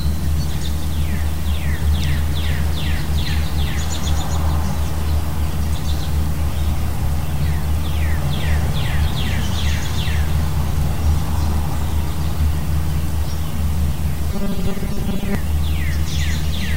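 From 14.32 to 15.35 s the sound collapses into robotic sound from repeated short buffers, a rigid 200 Hz metallic buzz. It is likely caused by audio arriving too late, with about half of it filled by looping 5 ms chunks. A spectrogram shows evenly spaced harmonic stripes, and the waveform shows identical repeating segments.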